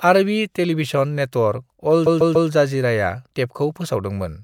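Repeated frames occur from 2.05 to 2.49 s in this speech: a 144 ms block, which fits a short run of compressed frames, plays three extra times. The decoder replays the same audio, so it stutters, and the clip grows by 432 ms.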